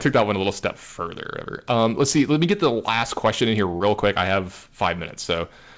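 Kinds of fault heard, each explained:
Hard clipping: The loudest speech peaks are driven about 8 dB past full scale and sliced flat, though only a small fraction of samples, under one percent, are cut. Unlike the steady coding hiss of the 8 kHz-limited call codec, this crackle comes only on peaks.
Short concealed packet loss: From 3.77 to 3.83 s, about 30 ms of audio never arrived and was patched by extending the preceding sound before blending back. It is a single brief smear or wobble, not a recurring crackle tied to loudness like clipping.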